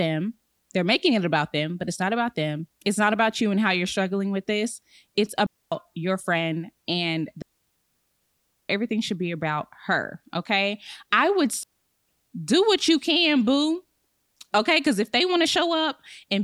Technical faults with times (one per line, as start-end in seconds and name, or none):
5.46-5.72 digital wireless dropout
7.42-8.70 digital wireless dropout
11.63-12.09 digital wireless dropout